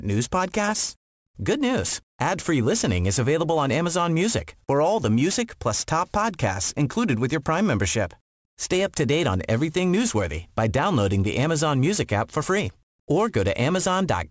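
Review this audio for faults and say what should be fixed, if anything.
Aliasing runs through the whole speech clip, from start to finish. Sibilants come out gritty and metallic because energy above 8 kHz was folded back down rather than removed, which fits a drop from 48 kHz to 16 kHz with no anti-alias filter. The folded components sit around 15 dB below the speech at unrelated frequencies. On a spectrogram the content runs hard up to the 8 kHz edge, with mirrored ghosts of high-frequency energy. Resampling should use a proper low-pass filter below 8 kHz before decimating.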